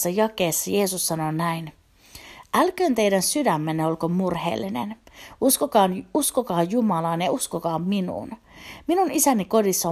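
No technical faults are audible.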